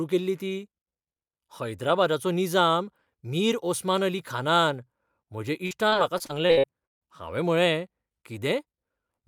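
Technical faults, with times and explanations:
5.67–7.03 s, repeated packet loss (robotic sound): the speech turns choppy here as the stream keeps dropping out, around eight holes in a row, the longest about 154 ms. Each gap gets patched by stretching the last bit of sound forward, roughly 0.39 s of fill in total, while about 0.42 s of real audio is simply gone. Because those smeared repeats cover nearly a third of the stretch and land in quick succession, you hear that buzzy, robotic stutter.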